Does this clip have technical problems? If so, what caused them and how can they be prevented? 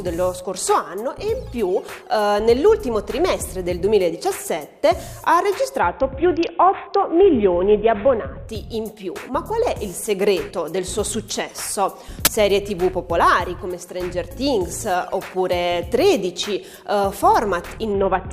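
Yes. From 5.80 to 8.48 s, and again from 17.92 s to the end, the treble goes dull and a gritty grain appears. This is a Bluetooth SBC bit pool drop. A congested wireless link forced the encoder to cut its bit allocation, consistent with a fall from a bit pool of 28 to about 6, or roughly 60 kbps. The highest sub-bands lost their bits and the rest were coarsely quantised. Keeping the link uncrowded and the devices close, or using a wired connection, prevents this.

At 12.25 to 12.27 s a loud 20 ms burst of harsh digital noise cuts through. This is an uninitialised buffer: a block was sent to playback before any audio had been written into it, so stale memory contents came out as samples. Zero-filling buffers and only starting playback after the first block is written prevents it.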